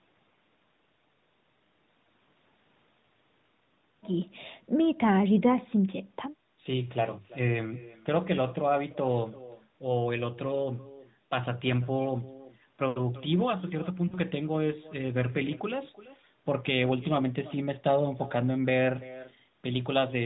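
Throughout the speech there is echo with no canceller: each phrase returns about 19 dB quieter, around a third of a second later, as a thin copy. The far end's loudspeaker feeds its microphone and nothing subtracts it, so the echo mirrors the talker's own words at that fixed lag. Reverberation would instead smear continuously, and a doubled path would return the copy almost immediately.

At 3.0 s, lost AMR speech frames cause a brief dip or warble of about 20 ms, which points to a single missing frame. The AMR-NB decoder, working at 12.2 kbps with only light coding damage, repeats its last good pitch and vocal tract settings at reduced gain. A second loss of about 40 ms, from 14.08 to 14.19 s, sounds more drawn out and sags before the voice returns weak or rough. This frozen, fading resonance sets it apart from a hard dropout to silence or a clicking sample glitch.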